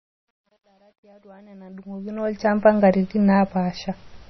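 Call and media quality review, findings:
Watery, swirly texture throughout, nothing above 5.9 kHz. Likely MP3 compression at a low bitrate, around 24 kbps. Weak spectral lines drop in and out, unlike steady lowpass filtering.

Truncation distortion on a fade: the fade-in from 0.00 to 2.58 s is gritty, worst from 0.00 to 1.79 s. Undithered low-bit gain stage, roughly 10-bit. Clears once level rises, unlike codec artefacts.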